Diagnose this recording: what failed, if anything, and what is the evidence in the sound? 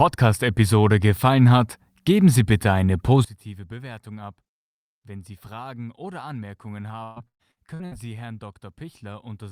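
From 3.25 s onward the mono sum drops by about 19 dB, likely one channel inverted in the wiring; the waveform collapses to a thin residue.

Repeated packet loss (robotic sound) at the network stage from 7.03 to 8.06 s: five gaps, longest 126 ms, patched with repeated sound, visible as smeared spectrogram bands.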